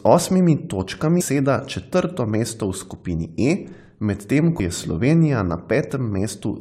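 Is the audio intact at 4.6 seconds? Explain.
No. At 4.59 s the speech is broken by a brief glitch lasting only a moment. This is damaged data in the compressed stream: some of the encoded bytes at that point were lost, zeroed or overwritten, so the decoder misreads the affected frame, loses sync and scans ahead for the next valid frame header. The short glitch is the decoder's output while it resynchronises.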